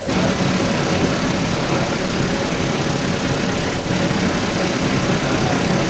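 Echo leak runs from 0 to 5.9 s: a second copy of the speech trails the original by about 345 ms and sits around 10 dB above it, so the delayed repeat dominates. The likely cause is a loudspeaker at one end of the call whose echo canceller failed to subtract what its microphone picked up, sending the speech back down the line. Everything stops at 8 kHz, as expected from the call's coding.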